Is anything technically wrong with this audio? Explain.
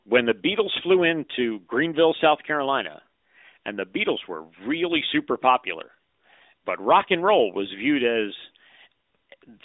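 No, nothing here is actually broken: it's speech that has come through an ordinary mobile call, so the thin, phone-line band you hear is just how that kind of connection normally sounds.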